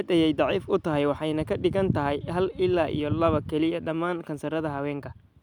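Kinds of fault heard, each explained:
No fault can be heard, as the speech signal runs with nothing interrupting or damaging it.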